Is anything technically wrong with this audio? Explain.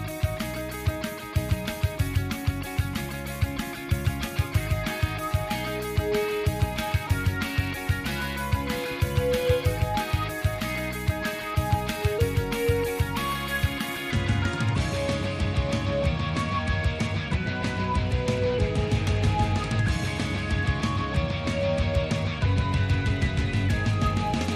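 No, nothing technically wrong stood out on listening to this audio.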